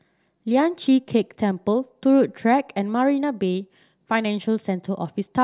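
Speech recording, no technical faults detected across the clip.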